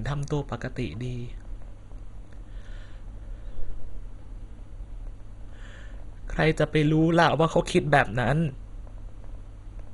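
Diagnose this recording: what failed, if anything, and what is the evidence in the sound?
Throughout the speech the sound is dull, with nothing above about 11.2 kHz, and a gurgling, granular roughness as upper sub-bands drop in and out. At the codec stage, the likely cause is heavy MP2 compression at around 56 kbps, starving Layer II's 32 bands of bits.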